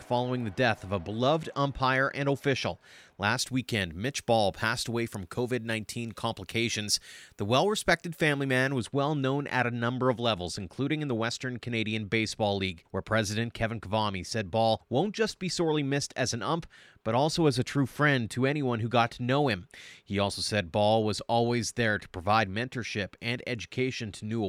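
Speech, with pre-emphasis left on from 3.39 s to 8.78 s. In that stretch the treble jumps up. The sound turns thin, bright and hissy, and sibilants spit. Highs sit about 10 dB hotter at 10 kHz than at 1 kHz. The boost rises like a standard 50 µs FM curve. The treble was lifted for recording or transmission. The matching de-emphasis was never applied on playback.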